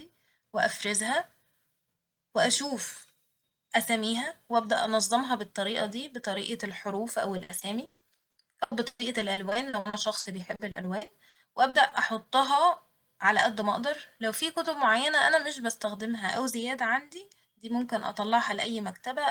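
From 7.37 to 11.93 s the speech turns choppy, with some two dozen short holes, the longest 160 ms. This is repeated packet loss (robotic sound): each missing stretch is patched by extending the preceding sound, concealing about a quarter of the span.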